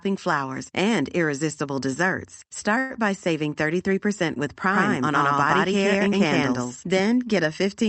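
At 2.79 s a call audio freeze stretches the last sound into a fading buzz until 2.92 s, likely from late packets draining the jitter buffer; spectrograms show smeared, static bands.

From 4.72 s to 7.00 s a doubled audio track trails about a tenth of a second behind at roughly equal level, likely a second capture path; waveforms show repeated, offset envelopes starting and stopping abruptly.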